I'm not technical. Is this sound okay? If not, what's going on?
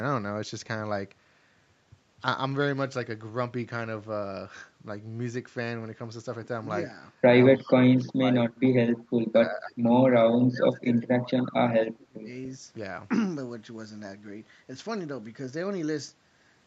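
No. From 7.57 to 7.71 s there's a faint echo leak, a very quiet copy of the sound arriving 292 ms late, likely from a loudspeaker on the other end.

The voice also dips or drops out at 7.6 to 7.75, 7.96 to 8.35, 9.24 to 9.87, 10.23 to 11.58 and 11.83 to 12.29 s. This is speech suppressed in double talk, likely because both sides spoke at once. Unlike the echo, nothing extra is added; the voice itself gets quieter.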